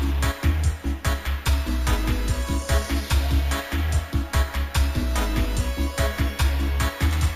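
Sample-and-hold upsampling without smoothing, which points to 16 kHz raised to 48 kHz, leaves imaging throughout the audio: a metallic fizz at 8 to 16 kHz, about 21 dB down.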